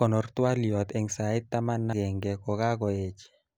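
Damaged data in the compressed stream at 1.93 s: corrupted bytes make the decoder lose frame sync and hunt for the next header, producing a brief glitch.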